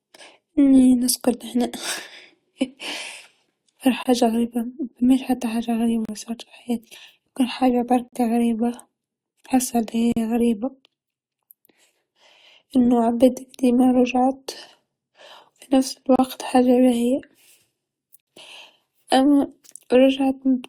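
Hard-edged silent holes cut the speech at 4.03 s (before "غريبه مافماش حتى"), 6.05 s (before "صارت في حياتي يمكن"), 10.12 s, 16.16 s (after "في نفس") and 18.21 s. They last 26 to 61 ms and fall on a 2-second grid. This is a gap between stream segments: timestamps on adjacent segment boundaries leave a short span that the player fills with silence.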